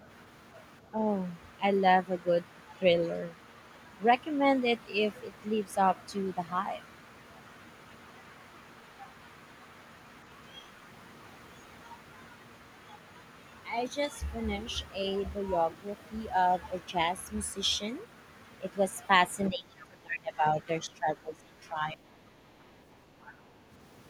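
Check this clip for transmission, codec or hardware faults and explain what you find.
Two echo-cancellation problems affect the last few seconds of this speech clip.

Speech suppressed in double talk, 19.49 to 20.45 s and 20.86 to 21.97 s: the echo canceller likely mistook overlapping talk for echo, ducking the talker by roughly 25 dB, then about 15 dB.

The other side's voice leaking through, 21.98 to 23.01 s and 23.21 to 23.42 s: residual loudspeaker echo likely slipped past cancellation, heard as a faint second voice about 35 dB, then about 25 dB, below the talker.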